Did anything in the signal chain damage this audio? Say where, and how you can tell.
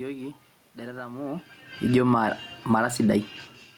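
Yes. In the call-processing stage, the automatic gain control turned its gain down from 1.8 s to 2.89 s, by about 6 dB. It judged the input too loud and backed off gradually. The level sinks over roughly a second, and the room noise underneath sinks with the speech. That shared drop marks it as automatic gain falling rather than the talker shifting position, which happens separately near 1.0 s.

The same stage then shows automatic gain rising from 2.09 s to 3.34 s, lifting the level by about 5 dB. The control had decided the input was now too quiet and pushed its gain back up, starting before the downward move had finished. Speech and background swell together over more than a second. This is distinct from the talker's own movement near 3.5 s, which changes the speech level at the microphone without raising the room noise.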